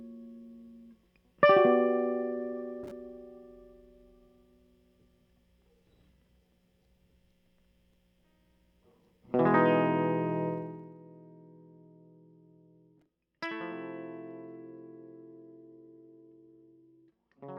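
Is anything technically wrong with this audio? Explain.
Yes. In this music clip, one level move is made in audible steps.

From 10.48 to 10.97 s there is zipper noise. The level drops by about 15 dB, but in 2 dB jumps at about twenty a second with no smoothing between them. Each jump leaves a tiny click, so a dry ticking rides over the music during the dip. A waveform would show a staircase-shaped envelope, and a spectrogram would show faint vertical broadband lines at each step.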